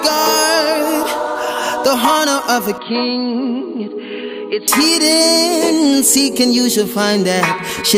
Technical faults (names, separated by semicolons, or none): input switched to a poorer device